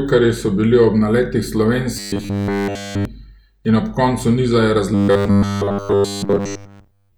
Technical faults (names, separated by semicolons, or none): robotic sound from repeated short buffers